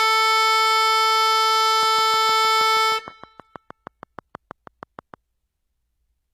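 The music carries HE-AAC compression from start to finish. The treble sounds rebuilt rather than real, copied up from lower bands. It turns gritty and metallic, and nothing remains above 14.9 kHz. The damage is plainly audible and likely comes from a low bitrate near 20 kbps.

From 1.83 to 5.15 s, a train of clicks sits over the music. About twenty clicks arrive at a steady 6.35 per second. Each has the same shape and peaks about as loud as the music. Nearby equipment interference is the likely cause.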